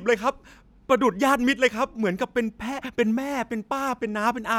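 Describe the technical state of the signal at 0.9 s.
At 0.9 s the speech signal is intact, with no audible technical fault at that moment.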